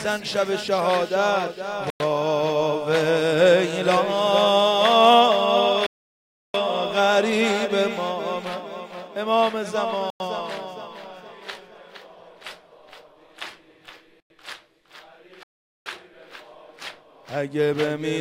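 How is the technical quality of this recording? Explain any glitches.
Not great: there are two kinds of dropout.

Gap between chunks, at 1.90, 10.10 and 14.20 s: the audio seems to arrive in 4-second chunks, and each join gets 100 ms of dead silence. Nothing's missing, but each hole cuts straight through the sound.

Playback stall, from 5.86 to 6.54 s and from 15.43 to 15.86 s: the output goes quiet for roughly 0.58 s and 0.43 s. That's likely the player running dry or getting blocked, so the sound stops mid-flow before carrying on.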